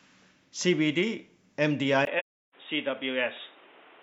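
At 2.05 s the speech turns dull and boxy. Nothing remains above 3.8 kHz. A brief 20 ms silence marks the change, and a new background noise sits well below the speech. The level barely shifts. This is likely the input switched to a poorer device, narrower in band.

From 2.19 to 2.55 s the sound drops out for about 0.34 s, which fits eight lost frames. This is AAC frame loss with muting. The decoder zeroed the missing audio, so the overlapping windows fade it out and back in. The hole has soft edges.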